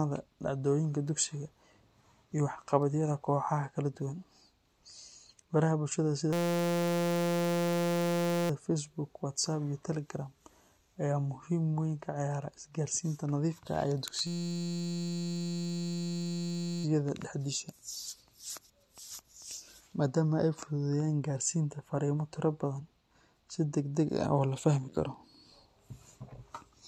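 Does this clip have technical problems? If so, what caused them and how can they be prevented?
Yes. A system hang loop occurs twice, from 6.33 to 8.50 s and from 14.27 to 16.84 s. The system stalled while the audio hardware kept replaying one 5.8 ms buffer. The repeats form a steady 172 Hz buzz, which fits a 256-sample buffer. Prevent it with stable drivers and a watchdog that mutes output when the audio thread stops responding.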